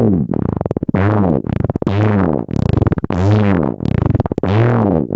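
Gain pumping runs throughout. The gain ducks by around 15 dB under each loud sound, likely from excessive gain driving a fast limiter. The waveform looks flattened. The spectrogram stops at 8 kHz, consistent with the call path.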